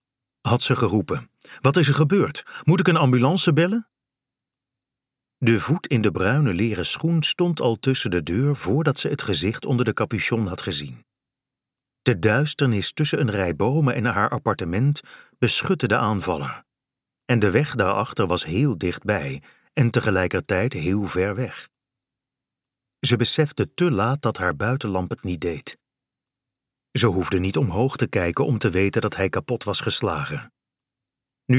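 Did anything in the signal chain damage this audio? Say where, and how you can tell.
No, nothing damaged this audio.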